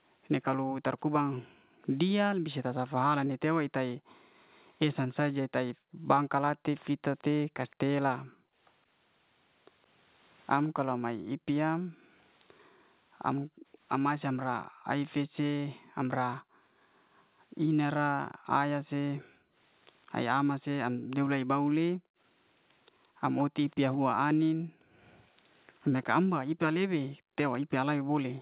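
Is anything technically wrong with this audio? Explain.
Yes, two kinds of fault are audible.

Background gated by the echo canceller runs from 0.63 s to the end of the clip. Whenever the far end's loudspeaker is active, the echo canceller clamps the microphone hard, cutting the room sound by up to about 40 dB. The ambience under the speech keeps dipping or vanishing outright, then swells back each time the canceller releases. The background sounds pumped and unstable rather than continuous.

Echo leak appears from 6.8 s to 13.4 s and again from 23.38 s to 27.56 s. The likely cause is an echo canceller on a loudspeaker-side device failing to remove all of the far-end sound its microphone picked up, so a residue was sent back. The result is a delayed copy of the speech, trailing by about 166 ms in the first stretch and 168 ms in the second. It sits faint underneath, roughly 30 dB down at first and closer to 25 dB down later.

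The band stops at 4 kHz, consistent with a G.711 mu-law call path.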